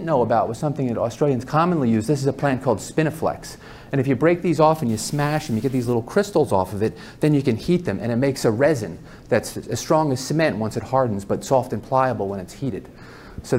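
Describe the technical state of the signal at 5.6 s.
At 5.6 s the signal is inside a stuck bit fault spanning 4.89 to 5.93 s, likely one data bit held fixed by a broken line or converter. About half the samples shift by a step of around -40 dBFS, producing harsh, buzzy distortion and noise-filled pauses.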